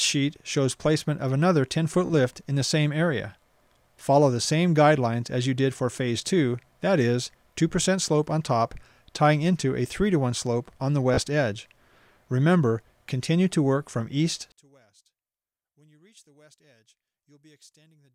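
Bluetooth stutter appears at 2.06 to 2.10 s and again at 11.14 to 11.20 s. In each case audio data arrived late or not at all, so the receiver kept replaying the last short slice it held until fresh data came in. Each event is a brief buzzing repeat lasting roughly 44 ms and 60 ms respectively. When the sound picks up again it has jumped forward by about 30 ms, which fits two lost packets.

From 14.52 s to the end, the whole sound suddenly drops by about 35 dB and stays that low. The likely cause is one channel inverted: one side of a stereo source had its polarity reversed, so when the two channels were summed to mono, everything they shared cancelled out. All that remains is the small difference between the channels, which plays on as a much quieter residue for the rest of the clip.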